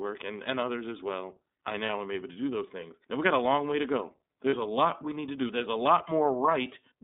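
The whole clip went through the iLBC codec, a narrowband VoIP coder, so the speech is limited to about 200 Hz to 3.7 kHz and sounds plainly rough and synthetic.

At 1.86 to 1.89 s, between "others as well I" and "am able to do", and again at 4.50 to 4.54 s, between "long way to go" and "a lot we need", lost iLBC frames leave brief gaps, each about the length of one 30 ms frame. The decoder fills each gap by repeating the last pitch cycle mixed with noise. This gives a short, buzzy held-vowel sound, and the speech recovers cleanly right after.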